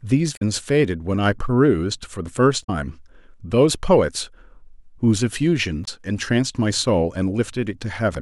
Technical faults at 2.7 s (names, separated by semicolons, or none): damaged data in a compressed stream